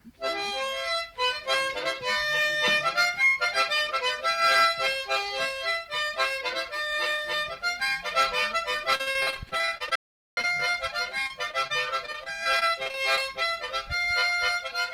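From 8.95 to 10.75 s there's repeated packet loss, giving that robotic sound: the stream keeps dropping out in short holes, around twenty of them, the longest about 52 ms, and each one gets patched by stretching the last bit of sound. It comes out choppy, with pieces missing.

Inside that stretch, from 9.96 to 10.37 s, there's an audio dropout to silence lasting about 415 ms. It's dead silence with no room tone, most likely from the input being lost while silence kept getting written.

The packet loss comes back from 11.23 to 13.19 s, lighter this time, with a dozen or so shorter holes, the longest around 24 ms. That's still enough to leave a choppy, stuttering texture as the concealment keeps repeating fragments over the gaps.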